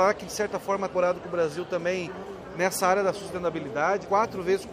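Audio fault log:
0.89–0.94 s and 4.00–4.06 s: damaged data in a compressed stream. Two short bursts of about 50 ms and 65 ms where the compressed bitstream is corrupted. The decoder cannot read the affected frames, loses sync, and searches for the next valid frame header. The gap is heard as a brief chirp, squawk, click or short hole.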